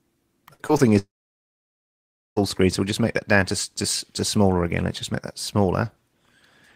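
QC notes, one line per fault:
0.53–0.61 s, burst of packet loss: about 60 ms of audio just isn't there. The receiver papered over the gap by carrying the last bit of sound forward and turning it down as it went, so you get a short held, fading patch instead of a hard cut. When the real signal picks up again it's already further along, and whatever fell in that window is gone.
0.67–0.71 s and 0.77–0.81 s, short concealed packet loss: two quick hiccups right after the burst, each covering roughly 20 ms that never made it to the decoder in time. Each hole got filled by extending the preceding sound and then blending back into the real stream, so they come across as brief smears or wobbles rather than dropouts. Anything very short sitting in those slots may have vanished.
0.99–2.38 s, long network dropout: here the sound trails off into a fading continuation of what came before, then goes to silence for about 1.3 s before resuming. 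The concealment can only stretch the last bit of sound so far before giving up, hence the quick fade and the dead air. This is most likely a stretch where nothing arrived over the network, and about 1.4 s of material is lost outright.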